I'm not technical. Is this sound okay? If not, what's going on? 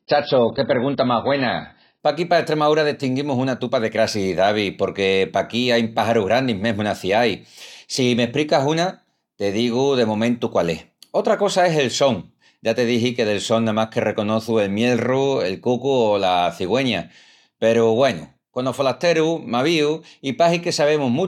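No. What you're hearing is an adaptive stream starting at a low bitrate. To begin playing quickly, the player first picked a lower-quality version of the stream, then switched to a much better one once it had measured your connection. For the first 2 seconds the speech sounds dull and smeared, because nothing above about 5.6 kHz comes through. At 2.0 s the clarity jumps up abruptly, without any gap or pause.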